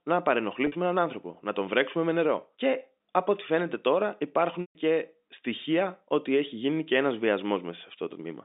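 Speech over a telephone-band G.711 path, with packet loss with pitch repetition at two points. At 0.67 to 0.72 s, 50 ms goes missing just before "έναν άνθρωπο να τον", and the receiver loops the last pitch period, giving a brief held, buzzy tone. At 4.61 to 4.75 s, after "φαίνεται τώρα", a 140 ms gap outlasts the roughly 50 ms fade of the repeated period, so the sound drops to silence before speech cross-fades back. Both gaps fit 10 ms packets.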